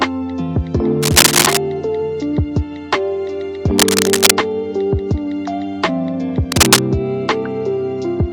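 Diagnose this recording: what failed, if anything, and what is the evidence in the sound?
Cable scratch noise at 1.02 to 1.57 s, 3.78 to 4.33 s and 6.52 to 6.79 s, rising a few dB above the sound. This is likely in the analogue wiring, where a worn connector or cable flexing changes contact resistance. Unlike isolated digital clicks or dropouts, each burst is dense, irregular rustling lasting a quarter to half a second.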